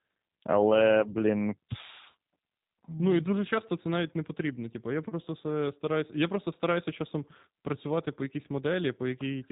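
G.729 coding runs through the whole clip, from start to finish. The speech has been rebuilt by a low-rate model rather than carried as a waveform: each 10 ms frame is reduced to a vocal tract filter, a pitch predictor and a few pulses, at what sounds like 8 kbit/s. Nothing above 4 kHz survives, so the speech is muffled and band-limited, and the damage is plainly audible as a rough, buzzy, synthetic texture.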